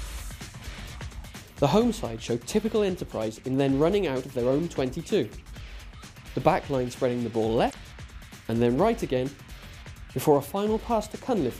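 At 7.67 s, running to about 7.75 s, a short burst of damaged data in the compressed stream breaks through. For roughly 80 ms the decoder is handed corrupted frames, misreads them, loses sync and hunts for the next valid frame header, producing a brief glitch. On a spectrogram this shows as an abrupt break cutting across the surrounding texture; on the waveform, a sudden discontinuity before normal signal resumes.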